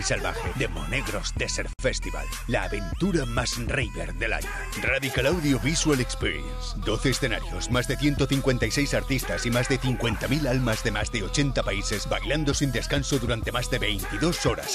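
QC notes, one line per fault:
1.73–1.79 s, gap at a join of encoded pieces: the sound drops to silence for about 58 ms with smeared edges, then resumes where it stopped. Separately encoded segments were spliced without trimming the encoder's leading delay and final-frame padding.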